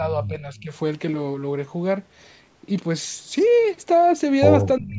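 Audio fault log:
0.00–0.73 s, speech suppressed in double talk: the speech dips by up to about 10 dB for most of this span. The likely cause is both sides talking at once, so the echo canceller could not tell this talker from loudspeaker echo and pulled everything down.
0.57–0.62 s, echo leak: a faint, brief copy of earlier speech, about 30 dB below the voice, arrives 360 ms late. The far end's echo canceller likely failed to remove all of what its microphone picked up from its loudspeaker, and that remainder returned.
4.79–4.99 s, speech suppressed in double talk: the speech drops sharply, by up to about 25 dB, until the clip ends. This is likely the canceller again attenuating everything while both sides overlapped.
4.88–4.93 s, echo leak: a short scrap of delayed speech sits about 20 dB below the voice, 367 ms behind its original. This is likely residual loudspeaker echo the far-end canceller let through.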